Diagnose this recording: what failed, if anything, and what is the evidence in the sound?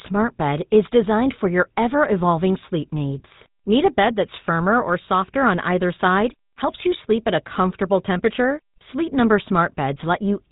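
Codec stage: GSM full-rate coding throughout gives the speech a buzzy, gravelly roughness from pulse-excited vocal-tract modelling; the spectrogram is empty above 3.8 kHz.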